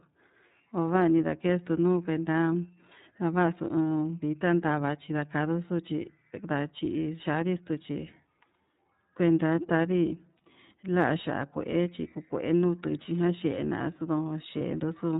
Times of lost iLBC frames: 10.37-10.41, 14.58-14.62

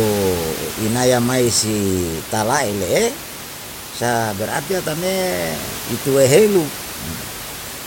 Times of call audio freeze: none

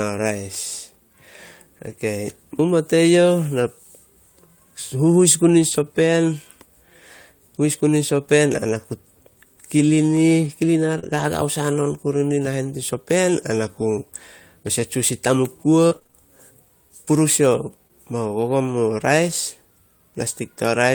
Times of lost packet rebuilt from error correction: 5.71-5.81

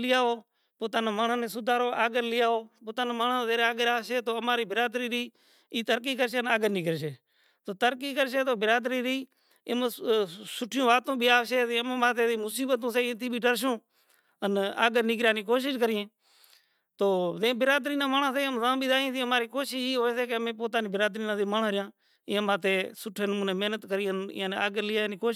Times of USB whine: none

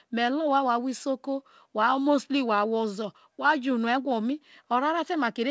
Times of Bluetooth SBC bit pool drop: none

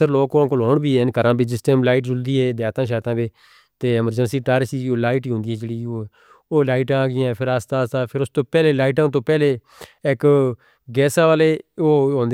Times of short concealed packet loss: none

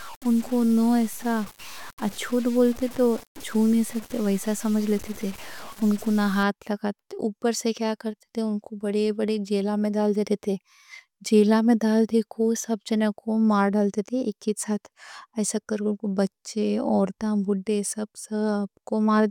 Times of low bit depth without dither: 0.00-6.43

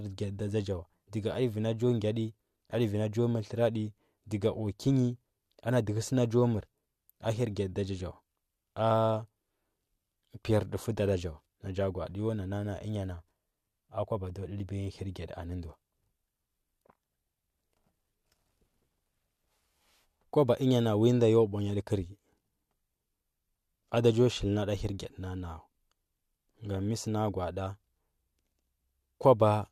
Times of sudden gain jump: none

